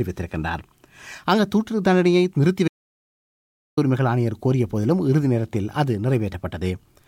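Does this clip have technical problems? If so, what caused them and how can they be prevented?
Yes: the sound cuts off abruptly at 2.68 s and returns at 3.77 s, leaving about 1.09 s of silence with no room tone. This audio dropout to silence likely came from the input being briefly lost, through a loose connection, failed link or accidental mute, while recording continued writing silence. Secure cables and wireless links, and monitor input levels during recording to prevent it.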